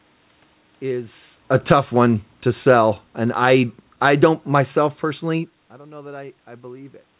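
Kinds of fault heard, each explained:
automatic gain falling: the gain control, reacting to input that was too loud or background noise too strong, eased its gain down about 9 dB over four seconds, so speech and background sink together.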